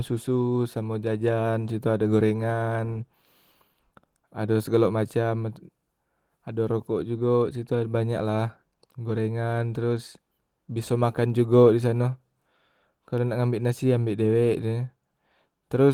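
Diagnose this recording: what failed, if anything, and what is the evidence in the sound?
Nothing stood out on listening to this speech recording that would point to a failure at any stage of the chain.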